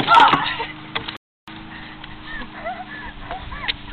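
A playback stall runs from 1.17 to 1.48 s: the sound cuts out abruptly in mid-flow and the output stays silent for about 310 ms before audio returns. The likely cause is the player running short of buffered data or its playback thread being blocked.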